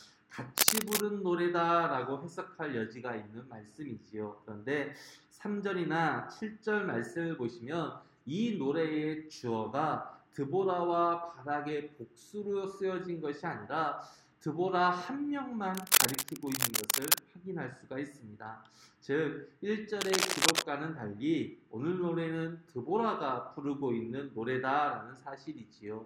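Bursts of cable scratch noise occur from 0.57 to 1.02 s, 15.75 to 17.19 s, and 19.99 to 20.63 s. Each is a dense, uneven rustle, a little louder than the sound itself. A worn cable or connector being moved is the likely cause.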